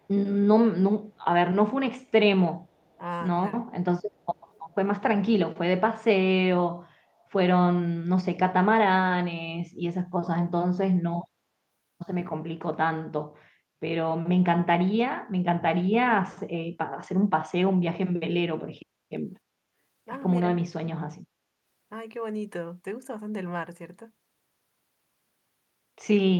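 A speech recording in which a faint delayed copy of the talker trails about 297 ms behind at 0.02–0.07, 2.81–2.98, 4.2–4.74 and 7.19–7.25 s, very quiet at roughly 35 to 40 dB down. This is likely an echo leak, where a far-end echo canceller let loudspeaker pickup return. At 10.17–11.21 s and 20.45–20.73 s the voice dips sharply, by roughly 30 to 35 dB, for under a second in total. That points to speech suppressed in double talk, likely an echo canceller ducking the talker while the other side spoke.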